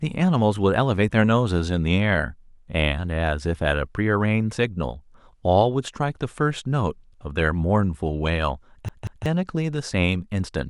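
A speech clip where the CD is stuck on one turn: the laser is knocked back a track at the same point on successive rotations, so from 8.89 to 9.26 s a 0.19 s slice of speech plays twice, each jump marked by a brief mute, giving a fast, even stutter.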